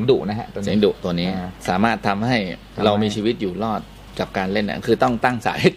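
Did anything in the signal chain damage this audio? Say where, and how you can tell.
No, nothing along the chain seems to have harmed this one, and I can't hear any trace of damage at any stage.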